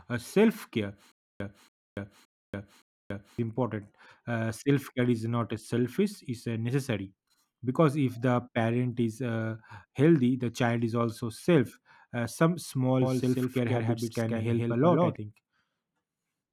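A stutter with silent gaps runs from 1.12 to 3.39 s. A fragment of speech about 283 ms long plays, then cuts to digital silence for about 284 ms, and the same fragment returns, so the burst repeats four times at an even period of about 567 ms. The likely cause is a stalled stream that replayed its last buffered piece at each retry and then ran dry. The speech due in those gaps never arrives.

A doubled audio track appears from 13.02 to 15.16 s. A second, full-band copy of the speech trails the original by roughly 150 ms and sits around 5 dB quieter. It carries no reverberant tail or room colouring and switches in and out abruptly at the edges of that span. This was likely caused by the signal being picked up again through a slower path and mixed back in, or by two misaligned copies left stacked in an edit.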